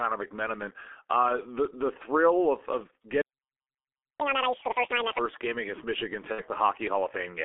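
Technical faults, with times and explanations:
Throughout: G.723.1 codec. The speech sounds muffled and hoarse, with smeared consonants. The low 6.3 kbit/s coder models the voice coarsely in 30 ms frames, and the telephone band of roughly 300 Hz to 3.5 kHz strips both the low warmth and the upper detail.
3.21–4.20 s: playback stall. Right after "the thrill of of" the audio drops to silence for about 0.98 s, then resumes. This is likely the player running short of data, or its output thread being blocked, so nothing reached the output until it recovered.
4.20–5.18 s: catch-up at higher speed. After the gap the speech races at double speed with a chipmunk-like rise in pitch of around ten semitones. It settles back to normal at "game against". The player is resampling its backlog faster to regain the lost time.
6.32–6.43 s: VoIP packet loss concealed by the speech codec. A brief fading smear replaces about 60 ms of speech, two codec frames. 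The decoder filled the missing packets by extending its last pitch and filter at decreasing gain.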